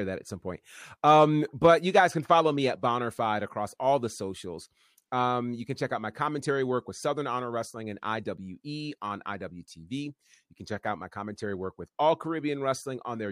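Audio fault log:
No technical faults can be heard in the speech recording; the signal stays continuous and steady in level with nothing breaking into it.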